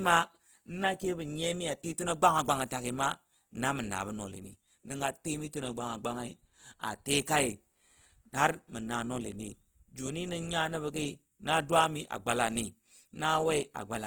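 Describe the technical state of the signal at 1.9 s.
At 1.9 s the speech sounds grainy and rough, with a noisy texture rather than swirling or watery artefacts, and the damage is plainly audible. This runs through the whole clip, not just this moment. The likely cause is Opus compression in its CELT music mode at a low bitrate, consistent with roughly 16 kbps. With too few bits, band energies are kept but their detail is filled by folding or noise. Bandwidth stays full, reaching about 20.2 kHz.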